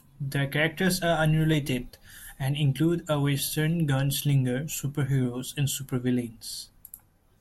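From about 1.54 s, just after "characters are", a regular click cuts into the speech and recurs roughly every 1.85 s until about 7.10 s, some four times in all. These are clock drift buffer slips, likely from two devices running on separate clocks that disagree by a couple of hundred parts per million. The buffer between them drifts until a small block of samples, around fifteen each time, is dropped or repeated, and each jump produces a click.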